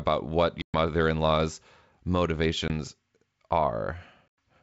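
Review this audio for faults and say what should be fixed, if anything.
Packet loss on an ADPCM call leaves three hard-edged silent holes: 0.62 to 0.78 s (about 120 ms lost, several packets), 2.68 to 2.71 s (20 ms, about one packet) and 4.28 to 4.39 s (about 100 ms). After each gap the audio returns slightly distorted, settling within some tens of milliseconds as the decoder's predictor and step size resynchronise with the sender's. That rough re-entry is what sets it apart from ordinary concealment, which would fade or repeat sound rather than cut to silence. The G.722 wideband coding itself sounds clean, reaching up to 7 kHz. To prevent this, add a jitter buffer with packet-loss concealment that resets the ADPCM decoder state after lost packets, and reduce loss on the network path.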